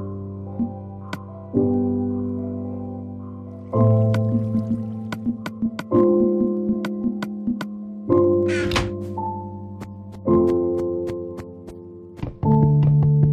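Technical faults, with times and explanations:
0.16 to 13.26 s, clock slip clicks: faint regular ticks about every tenth of a second, likely two free-running clocks roughly 200 ppm apart slipping single samples.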